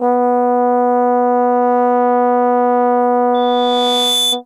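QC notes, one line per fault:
3.34–4.41 s, loudspeaker feedback squeal: a steady tone near 3.5 kHz swells over roughly 0.7 s to about the music's level. The microphone picks up its own loudspeaker; at that frequency loop gain exceeds one, so the tone regenerates.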